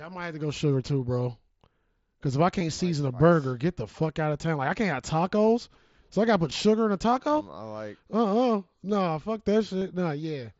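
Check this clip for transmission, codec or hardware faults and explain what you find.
Yes, there's one kind of fault: concealed Bluetooth headset packet loss, heard three times over the mSBC wideband link, which carries the speech up to 8 kHz.

At 2.60 s, after "if I", and at 6.51 s, before "sugar in a taco", about 7.5 ms of audio goes missing each time. At 9.80 s, after "no fuck", about 22.5 ms goes missing, which fits three lost frames in a row. The receiver fills each hole by repeating the best-matching recent stretch of waveform. The two short ones are nearly hidden. The longer one is a run, so it turns into a brief buzzy held tone with a small warble where the real audio picks back up.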